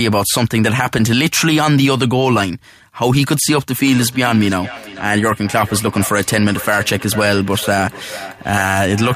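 From 3.92 s to the end of the clip, each phrase returns as a hollow, ringing repeat about every 400 ms, the loudest repeat sitting about 14 dB below the speech. This is feedback echo between two devices. Two devices in the same room are on one call, and one plays back what the other's microphone sent. That microphone picks the playback up again, but each echo canceller removes only its own device's output, so the sound keeps circulating around the loop.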